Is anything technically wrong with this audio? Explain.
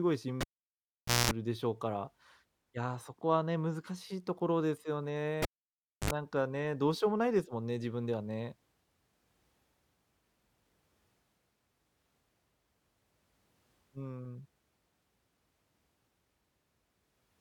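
Yes. A cable is pulled and plugged in at 0.41–1.31 s and 5.42–6.11 s. Losing the connection gives a pop and near silence. Then the tip alone touches, making a burst of 60 Hz and 50 Hz mains buzz lasting 0.21 s and 0.06 s, and a final pop.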